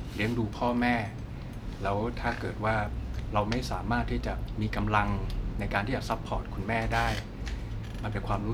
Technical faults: none

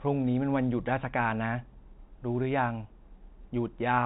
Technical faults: none

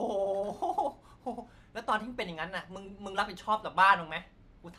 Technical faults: none

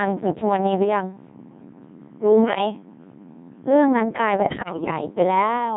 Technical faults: Codec 2 vocoder; bit errors on digital voice radio

